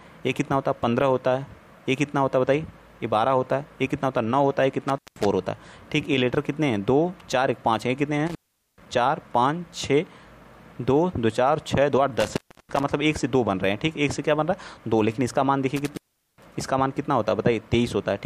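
A loose cable or plug breaks the signal path four times, an intermittent contact fault. Each time the sound drops out with crackle at the edges, leaving faint hiss while the line is open: at 4.89 to 5.26 s for about 180 ms, at 8.27 to 8.86 s for about 430 ms, at 12.20 to 12.83 s for about 320 ms, and at 15.76 to 16.55 s for about 410 ms.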